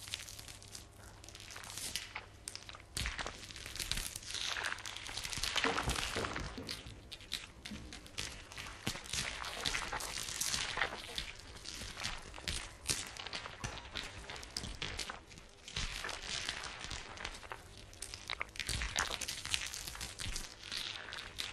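From 6.38 s to the end, the sound abruptly slows to about 0.74 times its original pace while its pitch stays where it was. The slowed stretch drags. This is a time-stretched section, likely from software lengthening the audio to fill a set duration, repeating short fragments to hold the pitch steady while spreading the material out in time.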